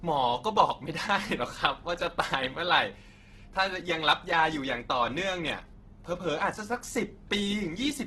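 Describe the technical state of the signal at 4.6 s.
At 4.6 s the speech carries Opus compression, present throughout the clip and likely from a low-bitrate encode near 12 kbps. Bands are noise-filled rather than emptied, so the voice sounds rough and grainy. A spectrogram shows a hard ceiling at 12.1 kHz with speckled, smeared harmonics.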